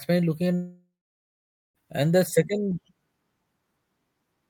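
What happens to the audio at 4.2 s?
Nothing goes wrong at 4.2 s; the audio is intact at that point.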